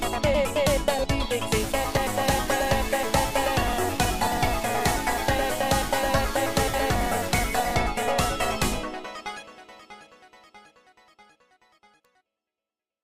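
Low bit depth without dither runs from 1.6 to 7.75 s: grainy distortion tracks the sound, with error only about 15 dB down, likely from rounding to roughly 5 bits. Damaged data in a compressed stream produces brief blips at 1.97 s and 6.74 s, where corrupted frames make the decoder lose sync.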